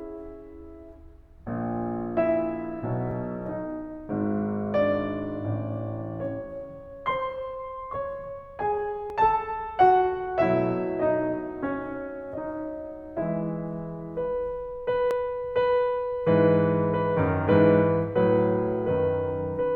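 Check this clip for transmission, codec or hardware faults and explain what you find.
There is one fault type, overlap between stream segments, recurring every 6 s in the music at 3.11–3.13 s, 9.10 s and 15.11 s. Overlapping segment timestamps make the player discard roughly 20 ms of real audio, so each spot sounds like a click or tiny skip, seen as a sudden waveform step and a thin vertical broadband line on a spectrogram.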